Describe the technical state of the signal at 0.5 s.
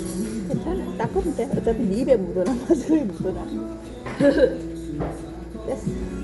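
At 0.5 s the sound carries Dolby Digital compression damage that runs through the whole clip. Nothing is present above 11.4 kHz, and rough, fluttering noise surrounds tonal parts, likely from an AC-3 encoder at a bitrate around 64 kbps that gave many frequency lines no mantissa bits, which the decoder filled with noise.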